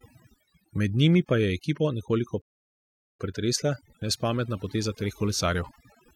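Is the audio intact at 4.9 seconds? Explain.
No. At 4.9 seconds, as throughout the clip, overdone noise removal is audible: bands near the estimated noise floor are pushed down or cut, taking quiet speech detail too. The background drops and breaks up into twinkling specks, unlike a plain low-pass that only dulls highs.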